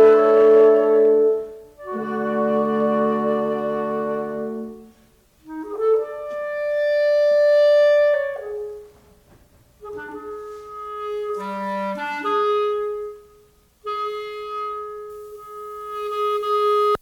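From 15.10 s to the end at 17.02 s, pre-emphasis is left on. The top end was lifted for recording and the matching de-emphasis was never applied. The curve fits the CD 50/15 µs standard. At 10 kHz the level sits about 8 dB above 1 kHz. So the highs come through too strong. The sound turns thin and bright. Sibilant detail jumps forward. The lower range feels weak beside it.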